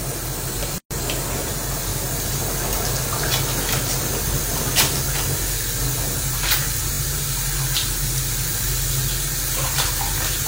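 Gap at a join of encoded pieces, 0.78 to 0.91 s: two separately encoded pieces were butted together without trimming, so encoder start delay and end padding remain. The sound drops out for about 126 ms with smeared edges, then resumes where it stopped.

Repeated buffer, 6.93 to 7.00 s: fresh audio arrived late, so the device replayed its last 21 ms block, consistent with a 1024-sample buffer, three extra times. This produces a quick stutter with hard joins at each repeat, and nothing is lost from the continuing sound.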